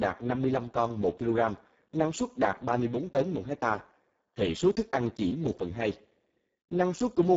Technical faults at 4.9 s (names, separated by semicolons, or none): Speex codec